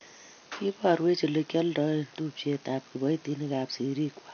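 AAC compression, throughout the clip: the speech is plainly damaged by coding, with nothing above 6.5 kHz, so it sounds dull and lacks air. The likely cause is AAC-LC coding at a low bitrate, consistent with roughly 32 kbps. The encoder saves bits by lowering the cut-off and quantising each frame's spectrum coarsely, which leaves a smeared, warbling texture on sustained sounds and a fizzy edge on sibilants.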